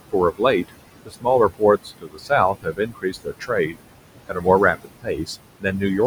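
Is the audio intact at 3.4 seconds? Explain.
No. At 3.4 s the noise suppressor has cut into the speech. Between 2.54 and 3.81 s it mistakes parts of the speech for steady noise and turns them down by up to about 21 dB, for a total of roughly 0.7 s. Soft consonants and quiet passages sound swallowed or faint. On the waveform the envelope sags there, and on the spectrogram the weaker speech bands fade out along with the background.

Noise suppressor artifacts are also present at this moment, as throughout the clip. The suppressor decides frame by frame which bands are noise and lowers them by about 21 dB, so the room noise, which sits about 11 dB below the speech, pumps down in gaps and back up under speech. A spectrogram shows patchy, flickering low-level texture in place of an even noise floor.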